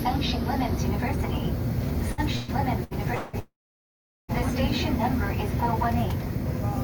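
From 2.12 to 3.36 s, repeated packet loss (robotic sound) sets in: four gaps, the longest 185 ms, are patched by stretching prior sound, making the audio choppy and robotic. Then, from 3.39 to 4.31 s, the last sound decays into about 780 ms of silence before resuming with material missing, likely a long network dropout.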